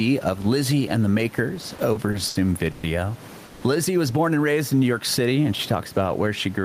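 Across the whole clip the level breathes with the speech, with a swing of roughly 10 dB, so loud and quiet passages sit close together and the sound feels squashed. This gain pumping is likely caused by input gain set far too high for the microphone, with a fast limiter or compressor clamping down on each peak. The room noise sits about 29 dB below the speech.

From 1.61 s to 2.85 s, starting just after "and the", the speech catches and drags in a run of repeated stalls (stutter). Packets reached the receiver late or too slowly, so the jitter buffer emptied seven times. Each time the last sound was stretched out to cover the wait, about 300 ms in total, with the longest hold around 120 ms. Roughly a quarter of that stretch is concealed audio. Nothing is lost, but delivery turns halting and uneven.

At 3.45 s to 3.64 s a single longer hold occurs: a call audio freeze lasting about 170 ms, heard as the last sound smeared into a fading buzz or hiss with no fall to silence. 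The likely cause is packets held up in transit until the jitter buffer ran dry. Playback then resumes where it stopped, so no audio is lost, but the speech now runs about 170 ms later than before.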